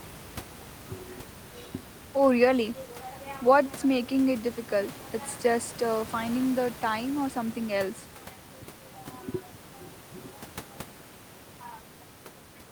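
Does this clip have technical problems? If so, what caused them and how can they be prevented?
No technical problems are audible.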